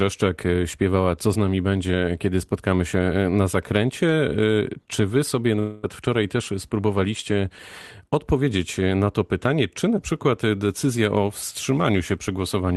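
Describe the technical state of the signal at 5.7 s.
Right around 5.7 s you're in the middle of a gap from 5.59 to 5.85 s, just after "wy sobie" and before "wczoraj też spróbowaliście", most likely a long network dropout. About a quarter second of audio never arrived, so the receiver papered over it by stretching the last sound into a fading buzz or hiss. It never quite reaches silence before the speech resumes, minus the lost bit, still carrying the Opus call-codec texture with its 12 kHz top end.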